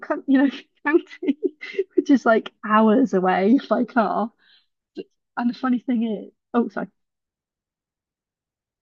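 A speech recording with nothing technically wrong with it.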